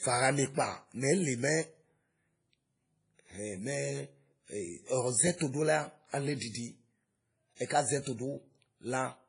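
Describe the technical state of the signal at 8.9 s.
At 8.9 s the speech sounds washy and ringing, with a hiss that swells and fades with the voice and nothing at all above 10.1 kHz. This runs through the whole clip. The likely cause is heavy WMA compression at what sounds like about 24 kbps. The transform codec spreads its quantisation noise over tens of milliseconds around each sound and discards weak spectral lines, which explains both the smearing and the hard top cut-off.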